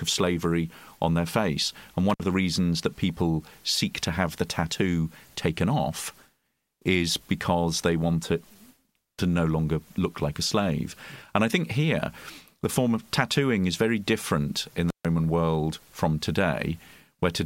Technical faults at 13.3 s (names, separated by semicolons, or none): none